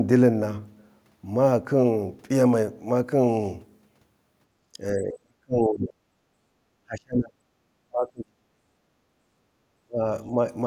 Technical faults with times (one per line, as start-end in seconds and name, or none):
4.73-6.07 speech suppressed in double talk
6.35-6.47 background gated by the echo canceller
6.83-7.37 speech suppressed in double talk
7.88-8.73 speech suppressed in double talk
9.01-9.15 background gated by the echo canceller
9.77-10.00 speech suppressed in double talk
10.27-10.34 speech suppressed in double talk